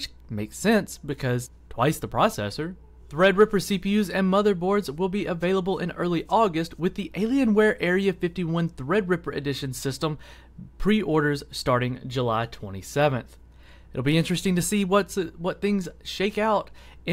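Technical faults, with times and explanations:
No technical faults can be heard anywhere in the signal.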